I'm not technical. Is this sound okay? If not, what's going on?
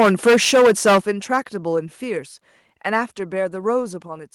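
No. For the first second, from the start to 0.98 s, the speech has a harsh, crackly edge on its loudest parts. That is microphone overload: the input is likely set too high, so the strongest peaks run past the maximum level and their tops are sliced off. Here a sizeable share of the sound is affected, about a fifth. It returns briefly and more mildly from 1.33 to 1.37 s, where only a few peaks get cut.

At 1.02 s the whole sound, speech and background alike, suddenly drops in loudness in a single step. This is the microphone volume being stepped down, likely the calling software reacting to the overloaded input by turning the microphone level down all at once. It comes right after the heavily distorted opening.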